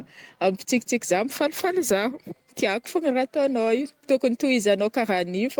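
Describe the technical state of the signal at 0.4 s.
At 0.4 s the speech signal is intact, with no audible technical fault at that moment.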